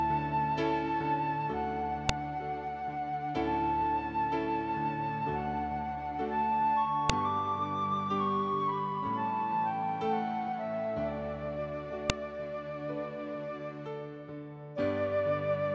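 Separate WAV pieces about 5 s long were joined without stripping their headers, so the header bytes at each join play as samples. This file header played as audio gives a sharp, loud click at 2.09 s, 7.10 s and 12.10 s, regardless of the surrounding sound.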